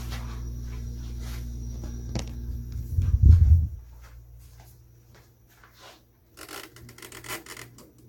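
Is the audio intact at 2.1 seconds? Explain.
No. At 2.1 seconds, as across the whole clip, the sound is swirly, hollow and smeared, with blurred attacks and nothing above 19.2 kHz. This is likely generation loss from Vorbis re-encoding at about 70 kbit/s, repeated perhaps seven times, with each pass requantising on a shifted frame grid. The damage is heavier than a single encode at that bitrate would cause.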